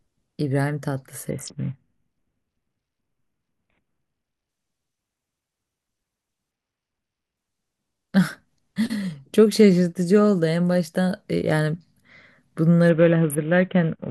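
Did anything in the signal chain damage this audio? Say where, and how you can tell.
Yes, at the codec stage: a Bluetooth SBC bit pool drop, heard at 1.30–4.49 s, 6.51–7.37 s and 12.89 s to the end. The speech goes dull and gritty there, which points to the link falling from a bit pool near 28 to about 5, roughly 54 kbps, leaving the upper sub-bands starved and the rest coarsely quantised.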